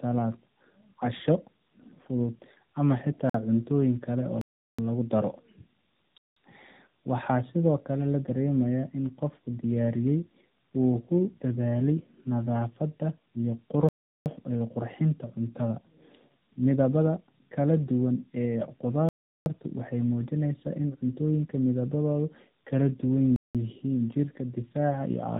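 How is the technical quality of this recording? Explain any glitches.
The quality is poor. The speech is degraded throughout and is broken by six dropouts.

Tandem speech coding runs through the whole clip. The speech sounds like it passed through two AMR-NB narrowband coders, the second re-coding the first's output. It comes out rough, muffled and warbly, with nothing above 3.8 kHz.

There are six blocks of digital silence. The first comes at 3.30 s, right after "fudud ama", and lasts 48 ms. The others fall at 4.41–4.79 s after "cuntooyin kale", 6.18–6.36 s, 13.89–14.26 s, 19.09–19.46 s before "waxay muujinayaan in cuntooyinka", and 23.36–23.55 s. Audio output drops to silence, likely because the buffer went unfilled. The 371 ms and 186 ms gaps fit 16384- and 8192-sample blocks. Each gap is a hard hole.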